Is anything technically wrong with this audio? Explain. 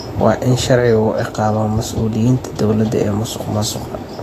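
Yes. Throughout the speech, the treble is likely degraded by Vorbis compression at a low bitrate, around 35 kbps. The coder quantises the residue coarsely and removes everything above 14.2 kHz, so fine high-frequency detail turns into grainy hiss and consonant attacks sound blurred.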